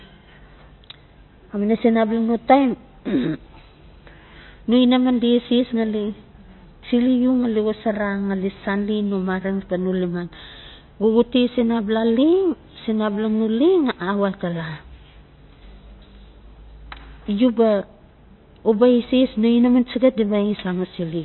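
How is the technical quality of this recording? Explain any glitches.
The technical quality is poor: heavy lossy coding runs through the entire recording.

Throughout the speech, MP3 compression is likely at work. The damage is plainly audible, and the sound points to a starved bitrate of around 25 kbps. The encoder cuts everything above about 4.1 kHz and discards weak frequency lines that drop in and out between frames. The result is dull, muffled audio with a watery, swirling texture. On a spectrogram, energy stops at a flat ceiling near 4.1 kHz, and the region below it looks patchy and speckled.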